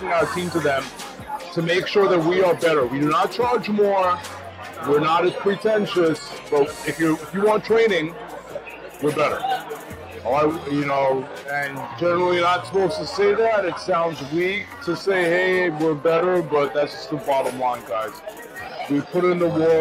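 At 10.48 s the pace drops abruptly to about 0.73 times its earlier speed and stays there until the end at 19.80 s, a time-stretched section. The pitch doesn't fall with the tempo, which sets it apart from a plain playback-speed error that would lower it. The slowed audio drags, likely because software lengthened it by repeating short pieces to fill a target duration.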